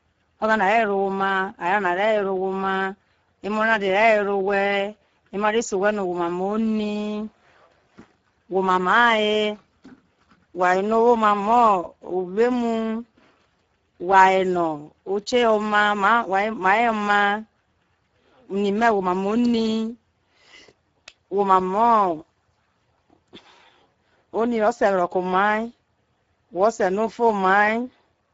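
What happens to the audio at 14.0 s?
At 14.0 s you're hearing the Speex codec damage that runs through the whole clip. The speech has a noisy, hoarse edge because the codec has too few bits to model the excitation, which fits a low setting around 10 kbps. Nothing comes through above 7.7 kHz.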